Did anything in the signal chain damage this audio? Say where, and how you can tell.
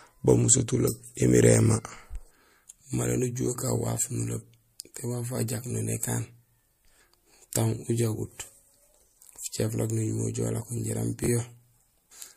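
Yes. At the codec, pre-echo at 7.51 s: a short hiss about 11 dB up runs roughly 18 ms ahead of a sharp attack. This fits a 36 ms transform window with no short-block switching. Steady hiss would be constant, but this sits only before the attack.

At the network or buffering stage, chunks out of order from 11.24 to 11.28 s: one 20 ms chunk plays a chunk late, leaving a jumbled moment with hard joins. A dropout would leave a gap, but here no audio is missing.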